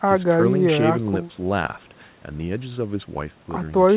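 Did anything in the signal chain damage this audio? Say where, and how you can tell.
No, nothing in the signal chain damaged this audio; the speech stops at 4 kHz, which is normal for the G.711 A-law call codec it went through.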